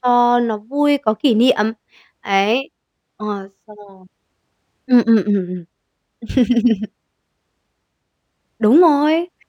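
A speech recording with imaging from linear upsampling throughout. The rate was raised by joining samples with straight lines. That acts as a poor anti-imaging filter. The highest frequencies sound dulled. Faint mirrored copies of the spectrum sit above the original band, from about 11.03 kHz to 22.05 kHz, roughly 45 dB below the signal. They add a light metallic shimmer to sibilants. The pattern fits a 22 kHz source raised to 48 kHz.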